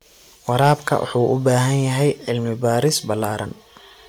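From 0.60 to 0.95 s the speech shows hard clipping: peaks driven about 5 dB past what a stage could pass were sliced flat, adding a harsh, crackling edge to loud syllables. The waveform shows squared-off tops; the spectrogram shows added high-frequency harmonics.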